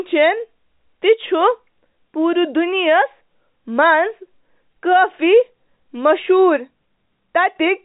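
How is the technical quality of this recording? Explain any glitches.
No glitches can be heard in this speech, which carries the narrow band of G.711 telephone coding with nothing above 3.8 kHz.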